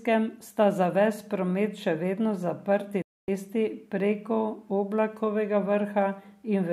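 A speech recording with a digital broadcast dropout from 3.02 to 3.28 s. The receiver muted with a 3 ms fade to full silence for 256 ms, which fits about eight failed frames. Unlike packet-loss concealment, nothing fills the hole, and the speech resumes further on rather than delayed.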